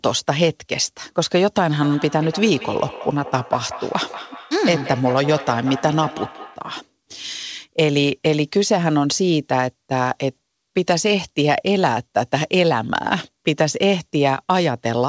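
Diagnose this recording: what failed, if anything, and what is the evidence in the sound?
The fault is a feedback echo between two devices, in the call-processing stage. From 1.82 s to 6.72 s each stretch of speech returns at a fixed spacing of about a fifth of a second. The repeats grow thinner and more ringing, peaking at about -14 dB below the speech. One device plays the other's incoming audio into the same room. Its neighbour's microphone picks it up again. Each echo canceller removes only its own playback, so the loop survives. The wideband call codec's 8 kHz ceiling is audible throughout.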